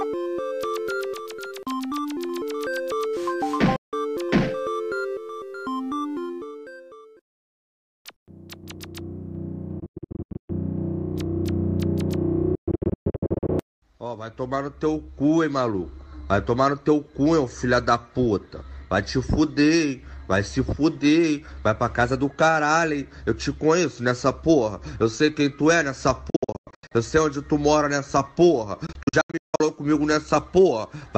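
Packets likely arriving too late for the headphones, a Bluetooth dropout, blank the output for 0.16 s at 3.76 s, then in bursts of gaps spread over 0.6 to 0.9 s at 9.80, 12.55, 26.30 and 28.86 s. Each time, the sound resumes further on, as though it had played through.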